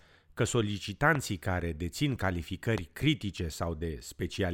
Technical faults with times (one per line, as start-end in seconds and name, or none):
1.15-1.17 loud pop
2.78-2.80 loud pop